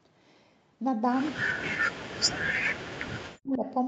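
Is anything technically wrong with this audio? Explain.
Yes. From 1.31 to 2.71 s and again from 2.98 to 3.64 s, the speech sinks sharply, by as much as about 40 dB. This is likely speech suppressed in double talk: with both sides talking at once, the echo canceller mistook this talker for loudspeaker echo and turned it down.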